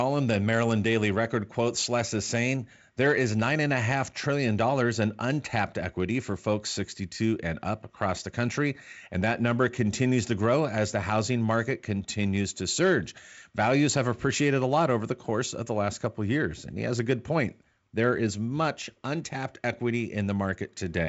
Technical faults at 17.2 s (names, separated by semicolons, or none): none